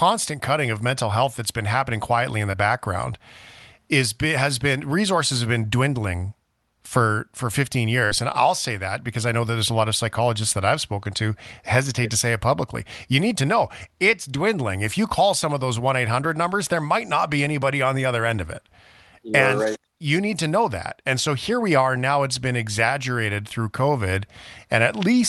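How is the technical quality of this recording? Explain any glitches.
Two brief dropouts from packet loss mar the recording, which comes through a WebRTC call path using the Opus codec, with the sound topping out around 12 kHz.

Between 2.51 and 2.55 s there is a short concealed packet loss. About 20 ms of audio never reached the decoder in time, so the receiver patched the gap by extending the preceding sound for roughly 19 ms before rejoining the real signal. You hear it as a tiny smear or wobble in the speech, and a short consonant at that point may be lost.

From 8.05 to 8.13 s a burst of packet loss removed about 60 ms of audio. The receiver tried to bridge the gap by carrying the last sound forward and fading it for about 55 ms. This produces a brief held buzz or fading hiss. When the speech resumes, the piece that fell in the gap is gone, so the sound jumps slightly ahead.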